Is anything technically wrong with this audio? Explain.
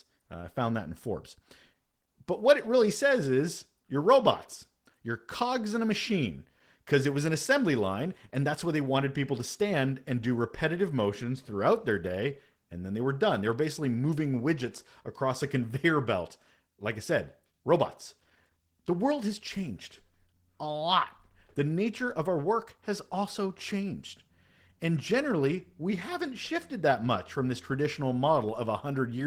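Yes. Throughout the speech, the signal has passed through Opus voice compression starved of bits. The character points to hybrid mode at a bitrate around 16 kbps: SILK's linear-prediction coder carries the band below 8 kHz while a thin CELT layer covers the top of the fullband range, both working in 20 ms frames. With so few bits, the excitation is coded coarsely, so the speech comes out plainly muffled, hoarse and slightly robotic.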